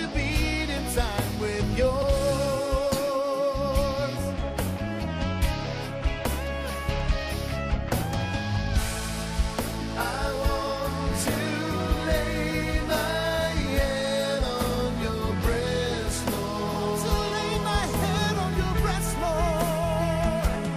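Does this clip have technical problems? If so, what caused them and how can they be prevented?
Yes. Repeated frames at 2.01 to 2.08 s: a 70 ms block plays twice, which fits three compressed frames, causing a stutter. Prevent this by checking stream writing and packet delivery for duplicates.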